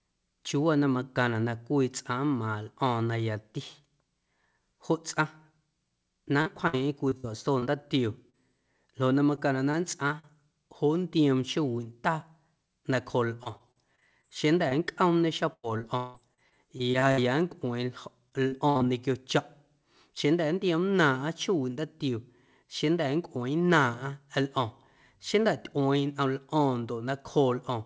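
Repeated packet loss (robotic sound) first appears at 6.42 to 7.64 s and returns at 9.35 to 10.25 s, 13.43 to 14.25 s, 15.53 to 17.19 s and 18.29 to 18.92 s. Each stretch is a chain of missing packets, each patched by extending the preceding sound. That gives a choppy texture. The worst stretch is 15.53 to 17.19 s, where about 28% of the span is filled in and one hole runs 173 ms.

Short concealed packet loss, by contrast, is a single isolated hole. It occurs at 8.30 to 8.35 s and at 14.69 to 14.73 s, covering about 40 ms and 20 ms of lost audio. Each is heard as a brief smear or wobble rather than sustained chopping. Throughout the clip, nothing is present above 8 kHz, which fits the wideband G.722 call codec.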